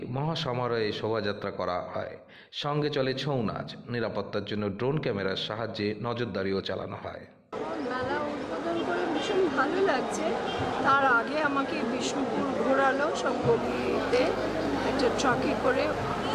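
A steady, raspy buzz enters at 13.59 s and lasts to the end: mains buzz, with switching spikes on 50 Hz mains adding harmonics, sitting roughly 15 dB below the audio.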